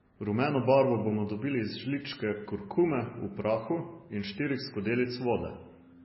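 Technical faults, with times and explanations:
Throughout, MP3 compression: the speech was likely squeezed through an MP3 encoder starved of bits, with damage heavy enough to suggest a very low bitrate of roughly 17 kbps. Short of data, the encoder dropped the treble outright, so nothing remains above 5.6 kHz and the sound is dull and boxed-in. It also zeroed the weaker frequency lines, which blink on and off between frames and leave a watery, swirling texture with smeared consonant attacks.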